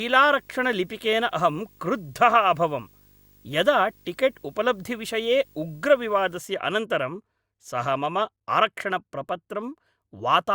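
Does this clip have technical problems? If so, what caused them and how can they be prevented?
Yes. From 0.0 to 6.38 s the speech carries video or display buzz: a 50 Hz buzz at the picture's field rate with hash above it, plus a faint whine at 15.6 kHz from the line scan, all well below the speech level. A screen or video cable is coupling into the audio path. On a spectrogram this shows as a ladder of 50 Hz harmonics and a steady line at 15.6 kHz, both stopping at 6.38 s. Route audio cables and inputs away from monitors and video leads.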